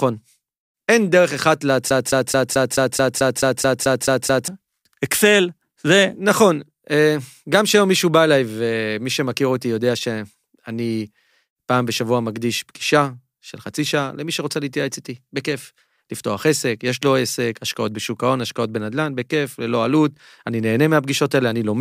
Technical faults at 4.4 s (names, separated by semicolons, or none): broken-record loop